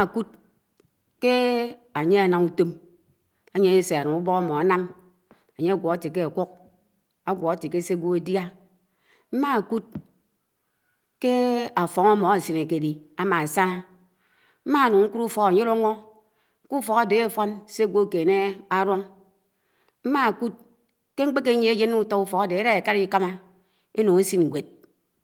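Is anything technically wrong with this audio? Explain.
No, nothing in this speech recording stood out as technically wrong on listening.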